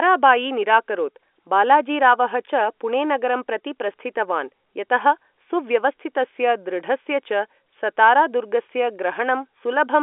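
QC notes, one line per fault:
No faults to log in this clip.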